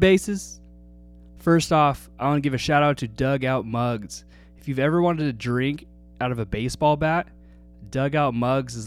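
Mains hum runs from start to finish of this speech clip, a steady low tone at 60 Hz sitting roughly 25 dB below the speech. It comes from the power line leaking into the signal path, either through a ground loop between connected pieces of equipment or by induction from a nearby transformer. Because the tone never changes, it stays audible under the speech and is most exposed in the pauses between phrases.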